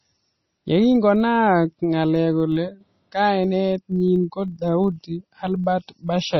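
From the first moment to the last, the speech has a watery, swirling quality. S sounds turn into metallic chirps, and consonant attacks smear. The likely cause is heavy MP3 compression. Starved of bits, the encoder zeroed weaker frequency lines, which then flicker in and out between frames. The damage points to a very low bitrate, around 24 kbps.

Running through the whole clip alongside that is a low, rough buzz at 25 Hz. It grows and shrinks with the level of the speech and fades toward nothing in quieter stretches. This is a filter restarted on every block: it loses its memory at each block boundary and begins again from silence, so every block opens with a small transient. Those transients repeat 25 times a second and fuse into a buzz at the block rate.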